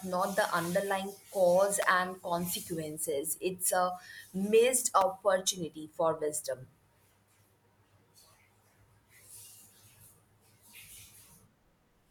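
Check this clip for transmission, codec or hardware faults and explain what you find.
Two brief faults turn up in the speech, both of the same kind. At 1.82 s and 5.01 s, sharp snaps sit on top of the speech, the first fairly strong and the second quieter; each is likely an electrical switching spike, a nearby arc picked up by the line.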